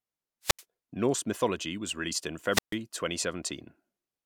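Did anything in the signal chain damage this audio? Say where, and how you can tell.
Yes, wireless microphone squelch dropout on the radio link. At 0.43–0.64 s and 2.51–2.76 s, RF fades until the receiver's squelch mutes, leaving 80 and 140 ms holes.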